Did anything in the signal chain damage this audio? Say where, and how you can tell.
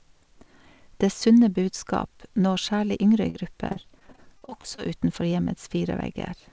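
Yes. The damage is on the network side of the call path: repeated packet loss (robotic sound) between 3.30 and 4.80 s. Thirteen short dropouts, the longest 45 ms, were patched by stretching the preceding sound, so about a fifth of that stretch is synthetic fill and the speech turns choppy. On a spectrogram the harmonics smear into flat, repeated slices below the G.722 band edge at 8 kHz, and the waveform shows periodic copies where detail should vary.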